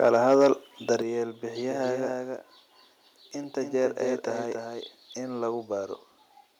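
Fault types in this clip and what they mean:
Microphone overload: From 0.04 to 0.48 s the loudest speech peaks run about 4 dB past the converter's ceiling and are flattened, with a small share of samples clipped, giving a harsh crackle. Input gain set too high is the likely cause.
Microphone volume stepped down: At 1.02 s the speech and background fall together by about 6 dB in a single step, shortly after the overloaded opening. This is likely the call software cutting the device's input volume after detecting clipping.
Doubled audio track: From 1.62 to 5.14 s a second full-band copy of the speech trails the original by roughly 300 ms at about 5 dB lower, with no reverberant tail, starting and stopping abruptly. A slower second capture path is the likely cause.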